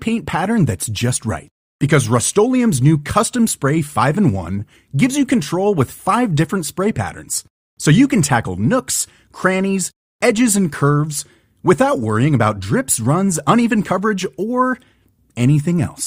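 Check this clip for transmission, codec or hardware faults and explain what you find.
There's one fault in this speech clip: repeated frames, from about 4.59 to 4.61 s, just before "gives you control with". A 20 ms block of compressed audio was written or sent twice, consistent with a single codec frame, so the decoder plays that slice again. You get a quick stutter, and the clip runs 20 ms longer than it should.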